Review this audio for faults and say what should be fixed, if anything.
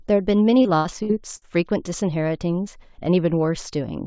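Repeated packet loss (robotic sound) runs from 0.62 to 1.45 s: four dropouts, the longest 81 ms, are patched by extending the preceding sound, so about a quarter of that stretch is synthetic and choppy. The band limit at 8 kHz fits a wideband codec such as G.722. Preventing this requires a more stable network path, a deeper jitter buffer, or forward error correction.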